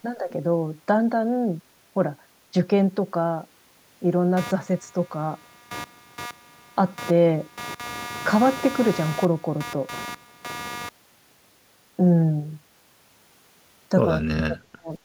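It's a speech recording with two separate problems. From 4.37 to 10.89 s there's computer activity noise, a buzzy, scratchy layer pulsing at around 200 per second and sitting only about 15 dB under the speech. That's the machine's processor or graphics load pushing current through a ground shared with the audio circuit, so the noise follows what the computer is doing rather than anything in the speech itself. Then, between 14.2 and 14.92 s, the voice gets pulled way down, dropping by something like 40 dB at its worst over roughly 0.7 s, so it nearly vanishes. That's speech suppressed in double talk, most likely caused by the far end talking at the same moment. The echo canceller couldn't tell the local talker apart from the loudspeaker echo, so it squashed both together.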